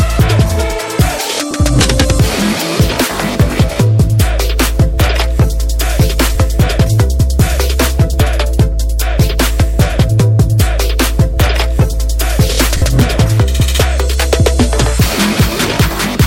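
Lost LE Audio frames at 1.51 s (30 ms) and 12.77 s (50 ms): the decoder concealed the gaps by replaying the last spectrum with scrambled phase, leaving brief noisy smears.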